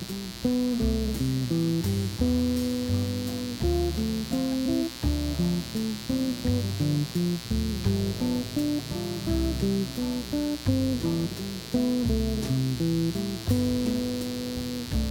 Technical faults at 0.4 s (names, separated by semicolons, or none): mains buzz